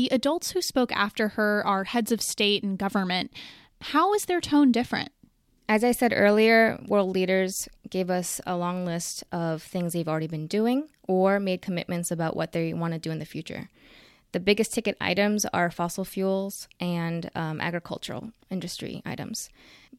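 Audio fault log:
No faults are audible anywhere in this speech clip.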